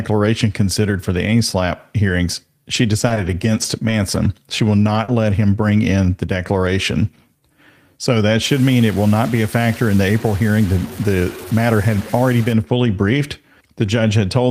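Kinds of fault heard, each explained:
Scattered short gaps: Between 2.73 and 5.32 s, just before "him bring in the", roughly three brief dropouts interrupt the speech. The longest is about 40 ms, and together they fill around 70 ms. The receiver lost or got late packets and covered each hole by extending the preceding sound. Only a few percent of that stretch is concealed, so the speech stays intelligible, but it carries small hiccups and smeared ticks where the patches sit.
Low bit depth without dither: From 8.42 to 12.53 s, ending at "fully briefed", the speech takes on a grainy, gritty distortion that tracks its level. This is consistent with requantisation to about 5 bits, likely truncated without dither. Because the rounding error follows the waveform rather than forming a steady noise floor, quieter syllables and decays turn rough and sputter between steps. The error sits only about 20 dB below the signal.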